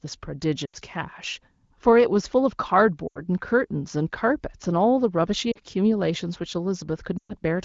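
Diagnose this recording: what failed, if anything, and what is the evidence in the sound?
Lost AMR speech frames on the radio link: at 0.65–0.76, 3.08–3.20, 5.51–5.58 and 7.18–7.34 s, 40 to 120 ms of sound drops to near silence within two frames as the decoder repeats the last pitch with falling gain. A hard dropout would cut abruptly instead.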